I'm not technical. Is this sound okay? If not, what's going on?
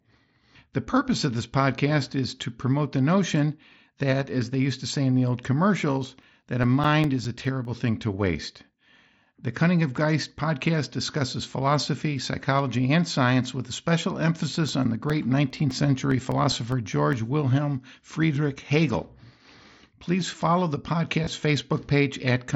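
No. CD scratch ticks appear from 6.02 to 7.65 s (nine ticks) and from 14.69 to 17.13 s (thirteen ticks), just after "science with a special". A blemish on the disc wipes out more data than the player can repair, once per turn, so it patches tiny gaps of a few milliseconds, which you hear as a steady row of small clicks.

Concealed Bluetooth headset packet loss occurs at 8.73 s, right after "thing to waste", and from 21.24 to 21.27 s, after "follow the". Bits of the speech, about 15 and 23 milliseconds, never reached the phone, which filled them by repeating the last bit of sound. The result is a very brief buzzy blip. This happens on top of the headset's normal wideband codec, mSBC, which only lightly dulls the sound.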